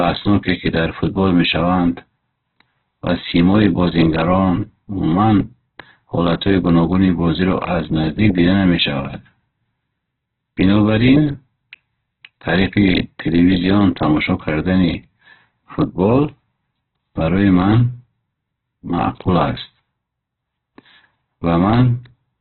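Throughout the speech, nothing sounds above 4.3 kHz, and it is heavily rough and grainy. This is likely Opus compression, at a very low bitrate near 8 kbps.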